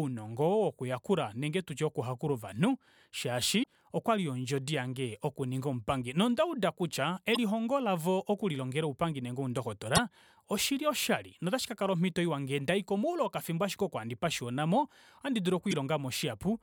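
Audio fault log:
3.59–3.66 s, 7.34–7.37 s, 9.95–9.99 s, 15.71–15.73 s: damaged data in a compressed stream. Four brief chirps, squawks, clicks or short holes, each about 25 to 65 ms long, cut abruptly into the speech. Corrupted bytes in the compressed stream make the decoder misread those frames and emit garbled output until it regains sync at a valid frame header. That produces a short glitch.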